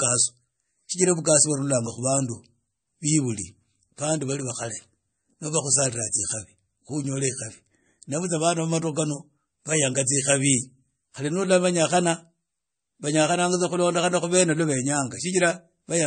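Throughout, the speech carries plainly audible watery codec damage and nothing above 9.1 kHz, likely MP3 compression squeezed to a bitrate around 32 kbps.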